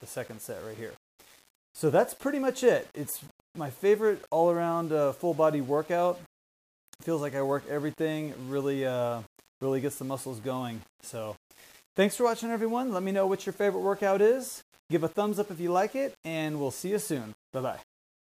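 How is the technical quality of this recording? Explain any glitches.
The technical quality is poor throughout. A grainy distortion follows the sound, gritty in quiet passages and sitting about 30 dB below the signal. It's likely low bit depth without dither, with samples rounded to about 7 bits.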